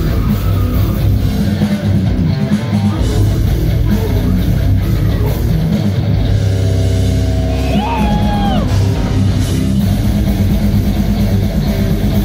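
At 11.58 s a brief patch of a few watery blips breaks through near the end of the audio before it clears. This is DAB burbling. Under weak reception, a small fraction of a percent of bits slipped past the error correction into the MP2 audio data. The corrupted samples put short blips of noise in individual sub-bands, which fits a handful of damaged frames.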